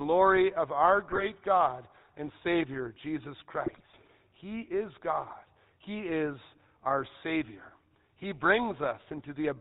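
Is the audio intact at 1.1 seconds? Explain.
No. From 1.08 to 1.23 s, just after "of our", GSM bit errors corrupt the decoder's filter, pitch and gain values, so the speech bursts into squawks, pops and gargling. Underneath, the GSM full-rate codec's pulse-driven vocal-tract model and 4 kHz ceiling leave the voice plainly buzzy and gravelly.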